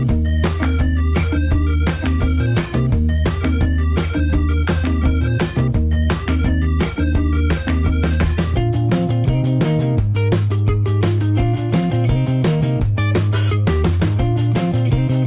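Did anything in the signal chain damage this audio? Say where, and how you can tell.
No, no signal-chain damage heard.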